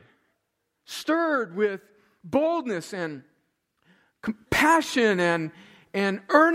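A speech recording with a sudden gain jump at 4.24 s: the level steps up by about 6 dB from one instant to the next and stays there to the end. The likely cause is a gain setting or bit shift applied without a ramp. Unlike compressor or AGC pumping, which swells and recovers over time, this change is instantaneous and permanent, and the background noise rises by the same amount as the speech.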